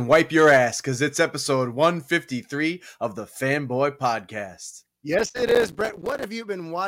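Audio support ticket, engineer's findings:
Gritty crackle over the speech from 5.19 to 6.24 s, classic processor overload crackle. The audio thread is missing deadlines back to back, each miss leaving a tiny silent gap. Spacing fits buffers of around 5 ms, dozens dropped. Worth checking CPU load there.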